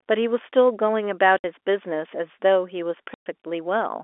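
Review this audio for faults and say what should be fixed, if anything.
Packet loss filled with silence cuts two holes in the speech. The first runs from 1.38 to 1.44 s and lasts 60 ms. The second runs from 3.14 to 3.26 s and lasts 120 ms. Both lengths fit whole 20 ms packets, three and six in a row. The receiver played nothing in their place. So the audio stops dead and restarts with hard edges. The narrow telephone band of the G.711 line is still audible around the gaps. A jitter buffer with packet loss concealment would fill short losses instead of muting them.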